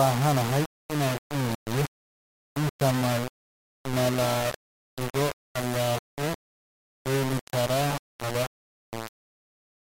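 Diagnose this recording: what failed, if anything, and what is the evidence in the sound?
The speech is coarse and grainy for its whole length, with distortion that moves with the sound; quiet passages turn gritty or sputter, and the error sits only about 10 dB below the signal. This is likely low bit depth without dither from a sample-format conversion, rounding to about 3 bits.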